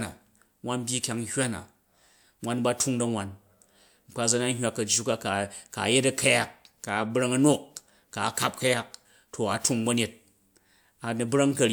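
No technical faults can be heard anywhere in the recording, and the signal holds steady and continuous for its whole duration.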